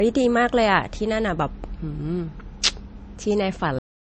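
From the start, the speech sounds watery and swirly, with a hard ceiling at 8.3 kHz and s sounds turning metallic. This is likely MP3 compression at a starved bitrate near 35 kbps. The flickering, warbling texture sets it apart from a plain low-pass filter, which would only dull the sound.

At 3.79 s comes a cut-off end. The final buffers never played, so the audio stops in the middle of a sound and drops straight to digital silence with no decay. A fade-out would taper, and a dropout would let the sound resume. This one simply ends.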